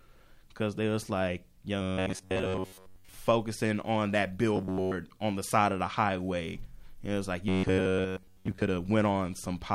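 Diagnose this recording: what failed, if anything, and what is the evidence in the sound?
The speech turns to robotic sound from repeated short buffers three times. It runs from 1.82 to 3.15 s, after "because there was like", and from 4.56 to 4.94 s, before "on the side of". It returns from 7.48 to 8.63 s. A rigid metallic buzz near 94 Hz sits on the speech, and most of the audio in those spans is lost to repeats. The likely stage is the driver or buffer. A buzz at that pitch fits a segment of about 10.7 ms looped while fresh audio arrived late.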